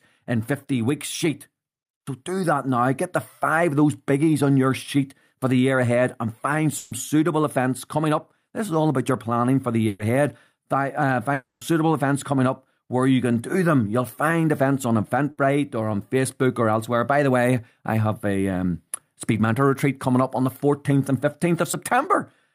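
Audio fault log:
0.67–2.82 s, automatic gain rising: the gain control judged the input too quiet and raised its level by about 3 dB, so speech and background swell together.
6.77–6.93 s, 9.87–10.01 s and 15.31–15.39 s, burst of packet loss: consecutive packets went missing, about 140, 120 and 60 ms. The receiver stretched and faded the last sound before resuming further on.
11.33–11.63 s, long network dropout: about 280 ms of speech is gone, heard as a fading continuation and then roughly 70 ms of silence. The likely cause is a network outage.
21.71–21.75 s, short concealed packet loss: about 20 ms never reached the decoder in time. The receiver extended the preceding sound and blended back, leaving a brief smear.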